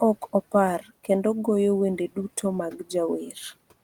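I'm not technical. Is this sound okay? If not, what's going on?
No. From 0.8 to 1.09 s there is speech cut by the noise suppressor: the noise filter mistook quiet speech for background and turned it down.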